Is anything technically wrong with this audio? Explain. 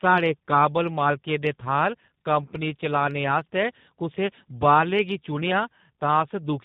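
Yes. Throughout, the speech shows tandem speech coding: it passed through a CVSD coder, then G.711 mu-law, then G.729A, and the G.729A coder re-encoded audio already roughened by CVSD. It sounds muffled, rough and warbly. A spectrogram is empty above 3.8 kHz, with smeared harmonics below.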